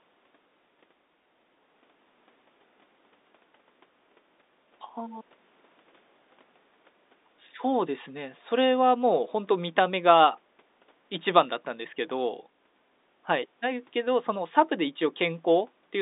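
No technical faults can be heard in this speech, which carries the narrow band of G.711 telephone coding, running from 250 Hz to 3.7 kHz with nothing above 3.8 kHz, as on an ordinary landline call.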